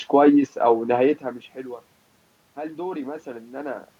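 No technical faults can be heard in this speech; the background room noise and the level shifts around 1 s and 3.5 s, where the talker moves relative to the microphone, are part of the recording.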